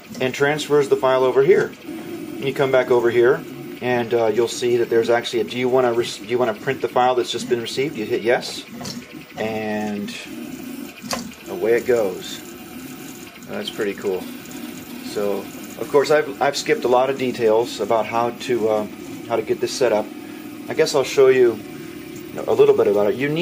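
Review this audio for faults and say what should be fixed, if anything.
No faults; nothing to fix.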